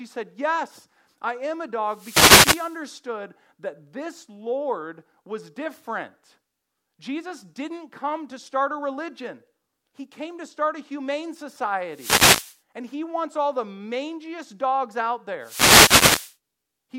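Speech with three wireless microphone noise hits: 1.85 to 2.84 s after "I am a", 11.89 to 12.60 s after "to start a humane", and 15.40 to 16.37 s after "the mangiest dogs out". Each is a burst of static as the FM radio link fades.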